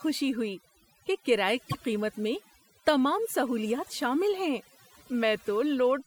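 Speech runs through the whole clip with overdone noise removal. Individual frequency bands near the noise floor have been pulled almost to nothing, so the background sits in near silence with twinkling specks. On a spectrogram this shows as a dark, empty floor dotted with isolated bright flecks, and the softer parts of the voice are gnawed into ragged patches. From 1.69 to 1.74 s, between "ہوئی کہ کرایے" and "قیمت میں تمام سہولیات", the audio jumps ahead across a gap of about 58 ms. The likely cause is a broken MP3 bit reservoir: frames were lost, and the next frame reached back for borrowed data that wasn't there. The span fits roughly two 26 ms frames and would appear as a narrow vertical smear or notch breaking the spectrogram's continuity, with an abrupt discontinuity in the waveform.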